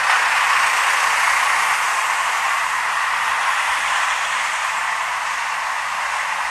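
Vorbis compression runs throughout the audio, likely the cause of a hard ceiling at 14.2 kHz and plainly audible damage: coarse treble quantisation turns fine detail into grainy hiss, roughening tones and blurring attacks, consistent with a low bitrate around 36 kbps.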